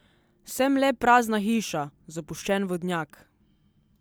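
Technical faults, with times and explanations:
No technical faults are present, so there are no times or explanations to give.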